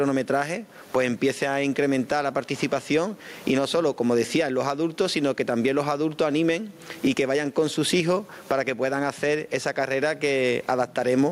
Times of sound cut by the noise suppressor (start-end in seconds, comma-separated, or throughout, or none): none